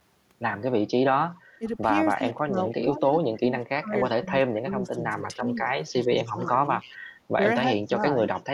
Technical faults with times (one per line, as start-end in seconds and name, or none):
1.31-2.72 echo leak
1.59-1.63 speech suppressed in double talk
2.18-6.52 speech suppressed in double talk
4.05-4.09 echo leak
5.88-6.97 echo leak
7.36-8.02 speech suppressed in double talk
7.86-8.42 echo leak